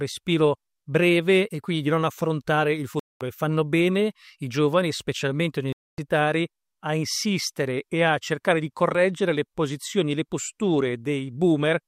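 The audio cuts to silence twice, from 2.99 to 3.21 s and from 5.73 to 5.98 s, with the sound resuming as if it had played on through each gap. This is likely a Bluetooth dropout, where packets arrived too late and were discarded.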